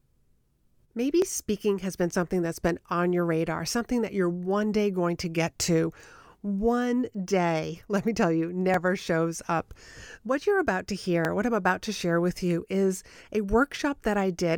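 A speech recording with overlapping chunks. Short clicks or stutters recur every 2.5 seconds: at 1.22, 3.73, 6.24, 8.74, 11.25 and 13.76 s. Each chunk began before the previous ended. About 7 ms of audio therefore plays twice at every join.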